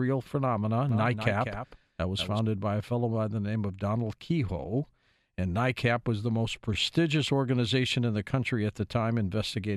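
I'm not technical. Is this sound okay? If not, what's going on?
No. A doubled audio track runs from 0.89 to 2.39 s, just before "by a fellow by": a quieter copy of the speech trails about a fifth of a second behind, likely from a second recording path.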